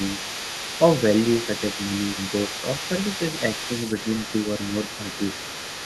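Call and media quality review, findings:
Other side's voice leaking through, 0.0 to 5.85 s. A second voice sits roughly 10 dB under the main talker. The far end is played on the loudspeaker and re-captured by the mic. Likely an echo canceller residual that was never fully suppressed.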